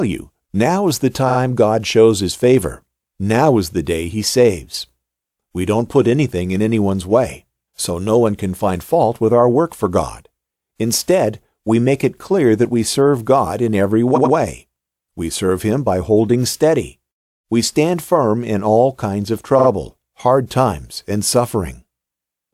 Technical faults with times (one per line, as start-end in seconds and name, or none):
1.28-1.37 repeated frames
14.14-14.33 repeated frames
19.58-19.67 repeated frames